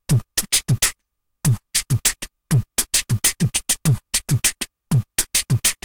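From start to finish there's hard clipping: the sound is pushed roughly 14 dB past what the stage can carry, so every loud moment gets its peaks sliced flat. Only a small share of samples hit the ceiling, but those squared-off tops throw harsh high harmonics, giving a gritty fuzz on each louder event.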